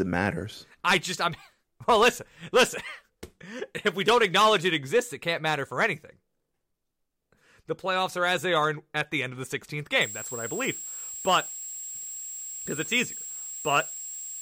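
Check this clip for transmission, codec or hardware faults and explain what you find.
There's one hardware fault, a switching supply whistle running from 10.01 s to the end. A power supply is running in an audible burst mode or beating with another supply, leaving a thin tone near 7.6 kHz, barely drifting, sitting only about 10 dB under the speech.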